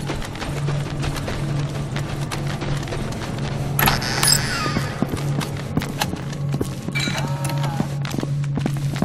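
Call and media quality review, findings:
Overlap between stream segments at 2.26, 6.22 and 8.20 s: brief skips, each roughly 6 ms. Segment timestamps overlap, so the player trims real sound at the joins and the waveform jumps. Spacing fits 2-second segment boundaries.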